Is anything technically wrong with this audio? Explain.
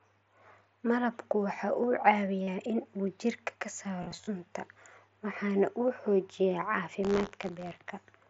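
Yes. The speech, which passes through a Bluetooth mSBC headset link with its band limited to about 8 kHz, has two kinds of fault.

Concealed Bluetooth headset packet loss occurs from 2.43 to 2.47 s and again from 4.02 to 4.27 s. In the first, about 45 ms of audio went missing. In the second, 142.5 ms were lost in scattered pieces across 255 ms, the longest unbroken gap being 30 ms. The receiver filled each hole by repeating the best-matching recent stretch of waveform, so the sound turns briefly buzzy and tonal at steady level, with a slight warble as real audio resumes. On a spectrogram these spots show smeared, evenly spaced harmonic lines without normal speech movement. The waveform shows repeated cycles at unchanging amplitude.

Buffer tearing runs from 7.02 to 7.83 s. The writing and reading positions of the output ring buffer have drifted into each other, so every period contains a small sliver of audio from one lap earlier, roughly 20 ms old, joined with abrupt edges. 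This produces a rough, robotic buzz at 86.1 Hz, which fits a 512-sample buffer, present only while there is signal. A spectrogram would show vertical click lines at that regular spacing, with the waveform showing sharp discontinuities at each join.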